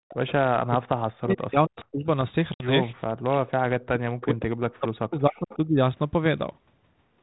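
Right at the start, 0.09 to 0.32 s, there's a faint delayed copy of the speech, about 431 ms late and about 20 dB down. That's an echo leak, most likely a far-end speakerphone whose echo canceller let some of its own mic pickup slip back. The same 431 ms ghost returns in short scraps at 1.8, 4.21 and 5.5 s, each lasting a few tens of milliseconds and sitting lower, around 25 to 30 dB under the speech.

From 0.59 to 2.06 s the speech keeps getting turned down, by as much as 40 dB at its worst, for roughly a second and a half in total. That's speech suppressed in double talk, likely the echo canceller getting confused while both ends talked and ducking everything to be safe. It happens twice more, from 3.29 to 4.54 s and from 4.7 to 5.82 s, each time for about a second. The little echo scraps at 1.8, 4.21 and 5.5 s fall inside these ducked stretches.

At 2.54 s there's a 60 ms hard-edged hole, which fits three lost 20 ms packets. 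That's packet loss on an ADPCM call. The gap is filled with silence, and the G.726 decoder's predictor and step size drift out of sync with the sender. So when the speech comes back it is slightly distorted, and it settles by about 2.69 s.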